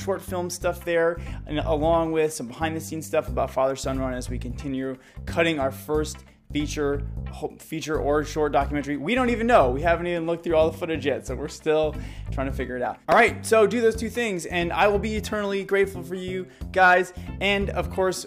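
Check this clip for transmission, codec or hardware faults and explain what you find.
Nothing amiss turned up anywhere in this recording.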